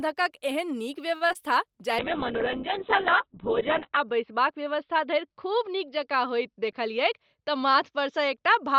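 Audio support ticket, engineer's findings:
Short stall from a late packet at 1.16–1.22 s. Sound held about 44 ms, slight buzz. Jitter buffer ran dry waiting for a late packet. Playback resumed at the same point. Nothing lost, but latency grew by 44 ms.

Short concealed packet loss at 1.28 s and 1.33–1.36 s. Brief smear. About 10 ms and 20 ms of audio never reached the decoder. The receiver extrapolated the last sound, then crossfaded back into the real signal.

Call bitrate drop from 1.99 s to the end. Sound turns muffled and rough. The bandwidth estimate fell, so the Opus encoder went from 32 to 7 kbps. Audio bandwidth shrank from 20 kHz to 4 kHz. The bitrate stayed at its lowest for about 2 s.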